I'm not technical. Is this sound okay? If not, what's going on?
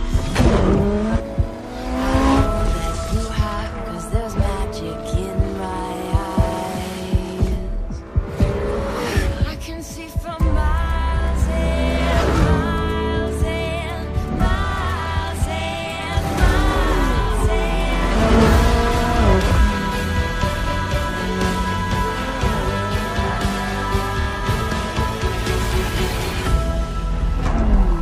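No, there are repeated frames: a tiny chunk of the stored audio, about 26 ms long, was sent again. It sounds like a brief stutter at 7.25 s and 17.23 s, and at 24.21 s the chunk repeats twice, making the skip slightly longer.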